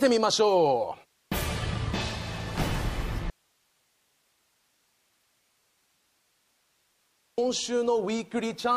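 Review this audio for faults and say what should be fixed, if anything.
An audio dropout to a faint residue runs from 3.30 s to 7.38 s, about 4.08 s of lost signal. The sound stops abruptly and the gap holds only hiss, roughly 45 dB below the normal level, before cutting back in. The likely cause is a broken feed ahead of a path that stayed live. Unlike a pause or fade, the edges are instant and the hiss persists. Monitoring for input loss and securing the source connection would prevent it.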